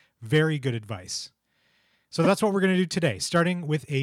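At about 2.24 to 2.27 s, just before "that's what we're going", there's a quick stutter from repeated frames. A 26.1 ms chunk of the speech plays twice, which points to a single compressed frame sent again, and the clip runs 26.1 ms longer.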